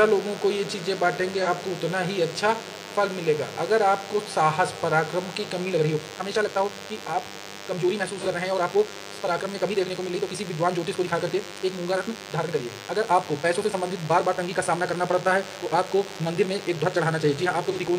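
A DECT cordless phone buzz runs through the whole recording: a thin, steady 100 Hz tone rich in harmonics, sitting some 15 dB below the programme. It comes from a nearby handset or base station whose 10 ms radio bursts are being rectified in the audio circuitry.

At 1.42 to 1.47 s there is AAC frame loss with concealment. A gap of about 43 ms, consistent with a single lost frame, has been patched by the decoder from the preceding spectrum, leaving a brief smeared, noisy blip rather than a clean dropout.

From 5.63 s to the end, the pace jumps abruptly to 1.7 times normal while pitch stays unchanged. The sound becomes rushed. This is likely a time-stretched section, squeezed by software that preserves pitch by dropping small pieces.

The same AAC frame-loss concealment recurs at 8.18 to 8.26 s and at 17.72 to 17.79 s. Each is again roughly one frame's worth of missing data, filled with a short phasey, noisy smear.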